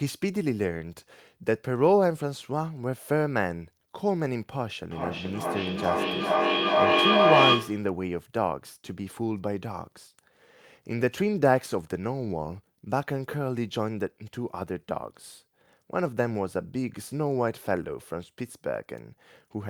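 From 4.88 to 7.98 s the speech is caught in a feedback echo between two devices. A second device in the room replays the call, and the first microphone picks it up again, which its echo canceller cannot remove. Each syllable returns roughly every 0.4 s, and the repeats grow instead of fading, peaking about 6 dB above the speech. A spectrogram shows stacked, evenly spaced copies of each syllable, and the waveform swells in regular pulses.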